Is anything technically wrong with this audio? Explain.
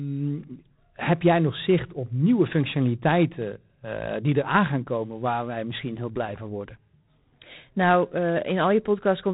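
Yes. G.726 ADPCM coding damage runs through the whole speech clip. It is plainly audible. The codec sends each sample as a few bits describing its difference from a predicted value. With so few bits, the errors become noise. Here that noise is a harsh, rasping hiss that rises and falls with the speech level, which fits the 24 kbit/s mode. Nothing above 3.9 kHz comes through, so the sound is narrow and dull.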